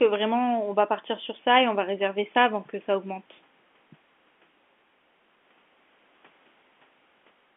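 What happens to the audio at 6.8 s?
Nothing goes wrong at 6.8 s: the speech continues intact through that moment, carried on the same narrow telephone-band G.711 line as before, with no dropout, click or distortion.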